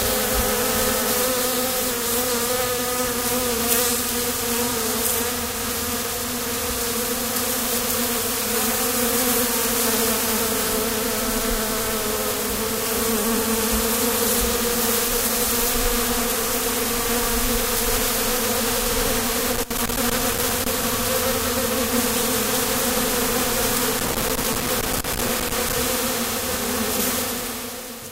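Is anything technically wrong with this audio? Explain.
Yes. From 19.52 to 20.84 s and again from 23.93 to 25.73 s, loose connector crackle: a worn or dirty contact breaks and remakes, chopping the signal into irregular bursts of crackling and scratching.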